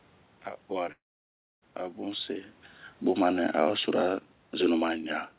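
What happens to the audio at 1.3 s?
At 1.3 s the sound is in the middle of a gap that runs from 0.92 to 1.64 s. Just after 0.92 s the last sound is stretched into a brief fading buzz, then about 0.6 s of near silence follows until the audio resumes. The likely cause is a long network dropout: roughly 0.7 s of audio never arrived, so the receiver could only conceal it and then went quiet. Unlike a short packet-loss glitch, the filler dies away into silence, and the lost stretch is simply skipped rather than delayed.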